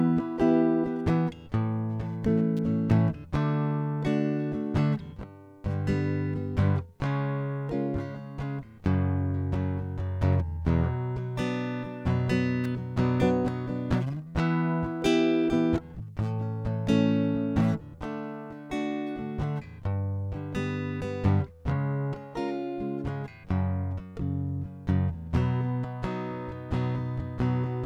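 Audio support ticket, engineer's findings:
Sharp snaps over the music at 2.57 s and 12.64 s, each a tight click riding on top of the mix, fairly low level, around -30 and -25 dBFS. Electrical switching spike, likely a nearby switch or motor arcing and coupling into the audio line.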